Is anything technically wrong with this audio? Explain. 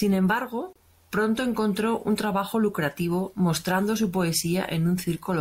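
Yes. From 0.73 to 0.76 s the speech stops for about 29 ms: a gap at a join of encoded pieces. Untrimmed encoder delay and last-frame padding leave silence between pieces. Unlike a dropout, nothing is lost; the sound resumes where it stopped, edges slightly smeared.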